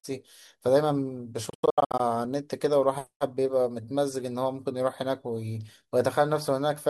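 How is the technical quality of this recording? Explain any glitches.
One glitch breaks up the speech. From 1.50 to 2.00 s, a Bluetooth dropout cuts repeated silent holes, the longest 87 ms. Packets likely arrived late and were discarded.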